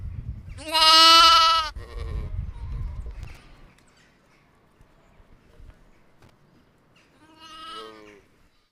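At 3.23 to 3.37 s, and again at 6.22 to 6.30 s, the sound breaks into short, irregular bursts of loose connector crackle. A worn or dirty contact is making and breaking as it shifts, so the signal is repeatedly chopped, and any DC on the line adds sharp pops. On a waveform each burst shows as jagged dropouts and spikes. A spectrogram shows thin vertical broadband streaks scattered unevenly across both intervals.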